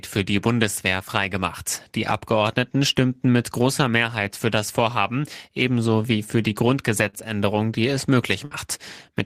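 At 7.10 s, right after "ebenso wie für die", there's a short stall from a late packet, lasting until about 7.16 s. A packet showed up behind schedule, the jitter buffer ran dry, and the receiver filled the wait by stretching the last bit of sound for about 31 ms. Nothing gets skipped, since playback picks up exactly where it left off before "die es", but that sound hangs a touch too long, and everything after it runs 31 ms later.

Then at 8.45 s, just after "die es", there's a burst of packet loss running to about 8.54 s. This time the data never arrived in time to play at all. The receiver carried the last sound on for about 59 ms, fading it as it went, so you hear a brief held buzz or dying hiss. When the audio comes back it has jumped ahead, and about 60 ms of the original is simply gone.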